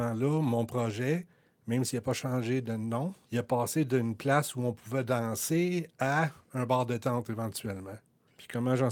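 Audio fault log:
The speech signal stays continuous and stable throughout, with nothing that points to a problem in capture, processing or playback.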